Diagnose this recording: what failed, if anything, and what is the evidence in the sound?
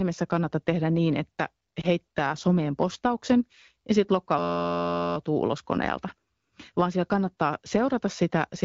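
On the radio link, a single AMR speech frame was corrupted and discarded around 1.81 to 1.87 s, just after "kannata tehdä niin että". These are lost AMR speech frames: the decoder filled the missing 20 ms by reusing the previous pitch and vocal-tract settings, which produces a brief dip or warble.

At the driver or buffer stage, the system froze while the audio hardware kept replaying its ring buffer, causing a system hang loop. From 4.39 to 5.17 s, after "someen postauksen ja sitten", an 11.61 ms fragment repeats 67 times, forming a steady 86.1 Hz buzz before "ulos koneelta". That fits a 512-sample buffer, and no audio appears to be missing afterwards.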